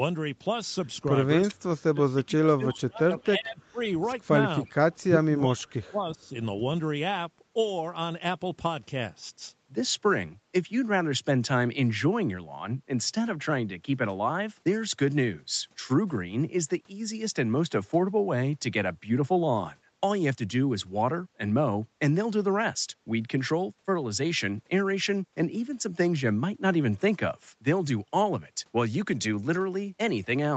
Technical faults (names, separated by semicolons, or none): speech suppressed in double talk; echo leak